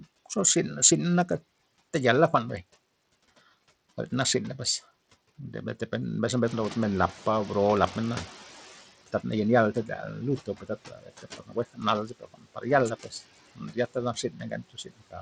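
A noise suppressor runs throughout this speech recording, pulling the background down by about 16 dB frame by frame, so the residue sinks between phrases and rises under them. Grit, aliasing and flickering treble, below the call microphone's top limit of 8 kHz, are likely from Bluetooth SBC compression with a small bit pool, consistent with roughly 80 kbps. When the room noise rises by about 11 dB near 6.5 s, the noise suppressor is catching up: its estimate lags from 6.45 to 8.88 s, letting noise through before it adapts over about 2.4 s to a cut of about 15 dB. The suppressor also mistakes parts of the speech for noise. Between 10.46 and 12.65 s, about a second of speech is swallowed, dropping by up to about 17 dB. From 13.55 to 15.21 s, about half a second is turned down by up to about 19 dB.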